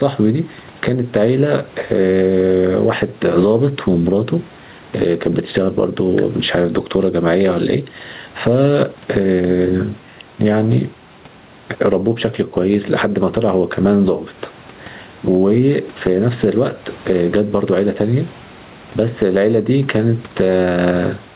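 Gain pumping runs throughout this speech recording: the level swings by around 10 dB as a fast limiter, likely behind excessive microphone gain, pulls the level down on each loud sound. The room noise sits about 37 dB below the speech, and nothing reaches above 4 kHz, which fits a G.711 narrowband call path.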